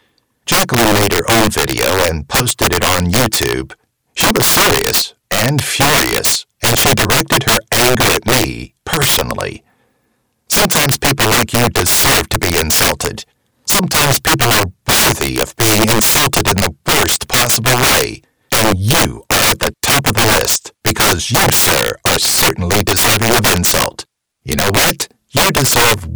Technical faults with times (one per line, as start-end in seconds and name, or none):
0.00-26.15 integer overflow